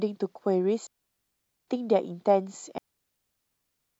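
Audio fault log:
0.87–1.68 s and 2.78 s to the end, digital wireless dropout: the speech falls into clean near-silence for 0.81 s, then for 1.22 s through the close, each time with a quick fade and no noise burst, as the receiver mutes when too much link data is lost.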